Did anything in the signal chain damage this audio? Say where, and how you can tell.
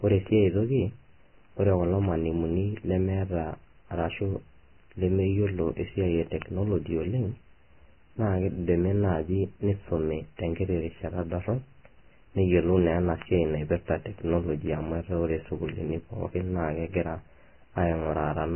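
Yes. The codec stage is the likely culprit for the first problem. The whole clip is dull and grainy, with nothing above 3 kHz. The treble that remains is hissy, and the speech sounds rough and smeared at onsets. That points to heavy Vorbis compression at a very low bitrate, near 11 kbps. At that rate the encoder lowers its cut-off and quantises the upper residue so coarsely that fine detail turns into noise.

The second problem is at a digital interface. Word clock ticks run from 0.11 s to the end. They come about every half second, around forty in all, and they are sharp but uneven in strength. A receiver on its own clock, not locked to the sender's, slips as the two clocks drift apart. Each slip drops or repeats a single sample. The steady rate fits a clock mismatch of a few tens of ppm.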